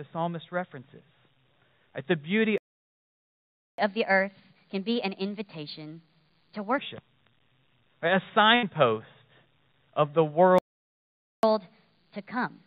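At 2.58 s the sound cuts out abruptly in mid-flow and the output stays completely silent until 3.78 s, a gap of about 1.2 s. This is a playback stall. The player most likely ran dry of buffered audio or had its playback thread blocked, so nothing reached the output until it recovered. The sound then resumes.

From 3.78 s to 6.78 s the audio runs noticeably fast and high, then settles back to normal. This is catch-up at higher speed. To win back the time lost in the stall, the player resamples its backlog at 1.25 times normal rate. Because resampling moves speed and pitch together, everything is lifted by roughly four semitones for those three seconds.

Between 8.55 s and 8.65 s the sound briefly freezes into a held, fading tone or hiss before jumping ahead. This is a burst of packet loss. About 80 ms of audio never arrived in time. The receiver spent around 71 ms extending and fading the last thing it had, then resumed further along, so that stretch of the original is simply absent.

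At 10.11 to 10.15 s there is a tiny smear or wobble, a short concealed packet loss. Roughly 20 ms of the stream missed the decoder. The receiver patched the hole by continuing the preceding sound for about 19 ms and blending back into real audio, leaving a momentary blur rather than a gap.

At 10.58 s the output drops to silence again, another playback stall lasting about 0.85 s. The likely cause is again the player running out of data or being blocked. The sound comes back at 11.43 s.

From 11.43 s to the end the audio is sped up and raised in pitch once more. This second catch-up at higher speed again runs at 1.25 times normal rate, about four semitones sharp, as the player works through its backlog.

Throughout, the band stops at 4 kHz, which fits a narrowband G.711 A-law call codec at 64 kbps.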